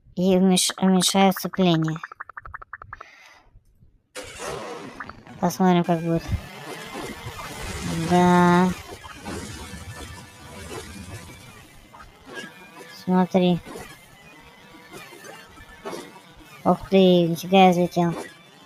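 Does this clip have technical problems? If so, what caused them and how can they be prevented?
Yes. A noise suppressor designed for speech was left running on material that isn't speech, so it keeps treating sustained and ambient parts of the sound as noise. Its gain swings by roughly 10 dB across the clip, giving a pumping, fluttering quality where held sounds thin out and tails collapse while sharper onsets pass through. Prevention: bypass or disable speech-oriented noise suppression whenever the source is music or general sound.

The sound cut by the noise suppressor shows up as distinct dips where the processor clamps down harder: 3.43 to 3.97 s (about 10 dB), 8.96 to 9.26 s (about 6 dB), 9.61 to 13.07 s (about 9 dB), 13.61 to 15.86 s (about 9 dB), 16.04 to 16.65 s (about 8 dB), and from 18.28 s to the end (about 9 dB). Prevention: use a non-speech processing mode so steady content isn't classified as noise.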